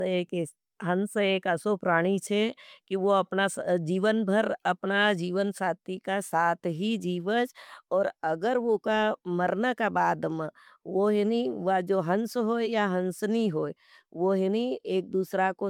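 Throughout the speech, generation loss gives a swirly, hollow smear and softened attacks, likely from about four MP3 passes near 130 kbit/s; spectrograms show scattered holes.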